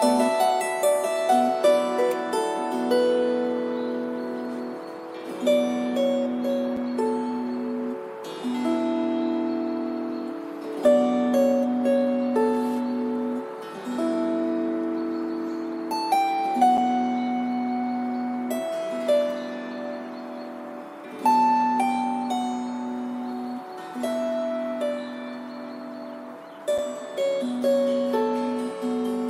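Short, hard-edged holes cut into the sound at 6.77, 16.77 and 26.78 s, each about 6.5 ms long and spaced 10 s apart. This is a gap between chunks: the audio was delivered in 10-second pieces, and silence was inserted at each join without losing any material.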